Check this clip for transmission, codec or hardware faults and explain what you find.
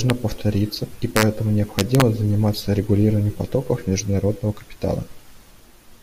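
Integer overflow shows up as harsh, violent cracks on loud speech peaks, much sharper than clipping. Peaks that should have been limited instead wrap past the integer maximum and flip to the opposite sign. The first crack comes at 0.10 s, just before "повториться и", with the peak only just reaching the limit. The second runs from 1.16 to 1.23 s, right after "повториться и", with peaks about 2 dB over. The third runs from 1.79 to 2.02 s, leading into "заниматься регулированием потоков международного", about 1 dB over.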